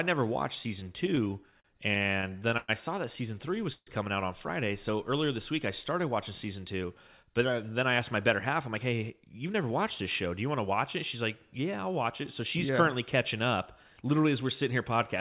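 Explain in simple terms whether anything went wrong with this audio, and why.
Three problems can be heard in this speech. From 0.8 to 2.7 s, after "never watched", repeated stalls (stutter): late packets left the receiver short 18 times, each gap stretched with held sound, the longest 110 ms.

At 3.72 to 3.89 s, just before "coming out on", a call audio freeze adds a 0.14 s pause, fading into brief silence, likely from delayed packets.

From 6.84 to 10.27 s, after "I started watching season", a jitter buffer speed-up trims about 0.2 s of tiny pieces, so the speech runs 6% faster.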